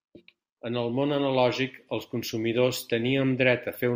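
No audible technical faults.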